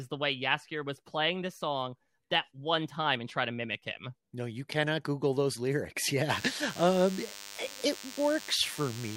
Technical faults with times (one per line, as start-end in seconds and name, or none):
6.30-9.17 DECT cordless phone buzz